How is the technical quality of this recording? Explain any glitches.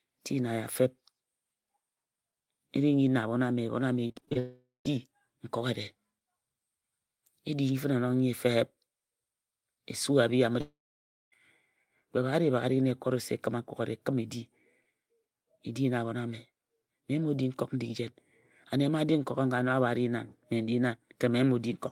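The recording is marred by network faults in two places, both in the speech around 4 to 5 seconds and again near 11 seconds.

From 4.07 to 4.37 s there is repeated packet loss with a robotic sound. Six short gaps, the longest about 39 ms, were each patched by stretching the preceding sound, so nearly half that span is synthetic and comes out choppy.

Immediately afterwards, from 4.39 to 4.87 s, and again from 10.61 to 11.34 s, there is a long network dropout, likely caused by audio failing to arrive for about 0.46 s and then 0.72 s. The last sound is prolonged as a fading buzz or hiss before the audio goes dead, for about 0.14 s the first time and 0.57 s the second. Speech then resumes with that stretch lost.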